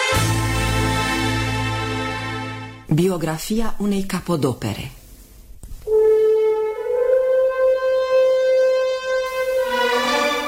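From 9.26 s to the end, the signal drops to low bit depth with dither, consistent with about 6 bits, leaving a steady, even hiss roughly 25 dB below the sound.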